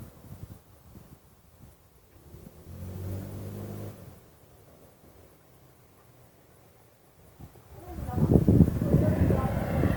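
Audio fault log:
Throughout: likely Opus compression in music mode at a low bitrate around 24 kbps; band-filling leaves the sound grainy, rough and noisy rather than swirling, content reaching about 20 kHz.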